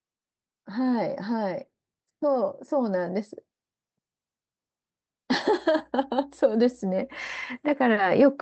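From 0.72 to 3.21 s you can hear automatic gain rising: the AGC decided the input was too quiet and eased its gain up by about 4 dB, so the voice and the background swell together over those couple of seconds, all through the call path's 8 kHz band limit.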